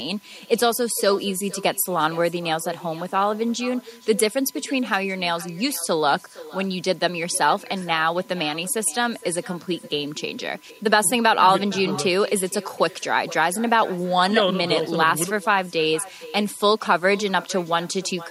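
Speech recording with two faults present from start to finish. A steady USB whine sits at 1 kHz, about 35 dB below the speech. The bus's 1 ms frame activity is leaking in through power or ground. Its fixed pitch at exactly 1 kHz, rather than 50 or 60 Hz with harmonics, separates it from mains hum. There is also echo with no canceller: every phrase returns as a distinct, thinner copy about 19 dB down and roughly half a second late. It is a far-end loudspeaker feeding back into a microphone with nothing removing it. That clear gap between original and copy is what distinguishes it from ordinary room reverberation, which smears continuously onto the sound rather than repeating it.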